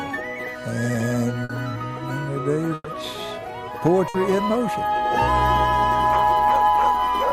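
At 1.44 s, 2.74 s and 4.08 s, a burst of packet loss briefly breaks up the sound. Each time, a stretch of audio never arrived, and the receiver filled about 50, 110 and 60 ms by repeating the last sound at a falling level. This is heard as a short held buzz or fading hiss before the audio jumps ahead. A spectrogram shows smeared, steady bands that fade out. The second gap ends in 20 ms of silence.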